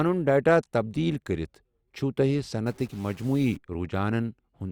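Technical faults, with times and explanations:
2.67–3.57 s, stuck bit: the speech turns grainy with noise, and pauses fill with faint noise. One data bit is likely stuck, shifting samples by steps of about -50 dBFS.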